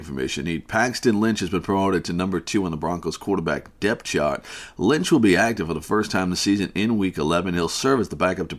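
No technical faults are audible anywhere in the recording.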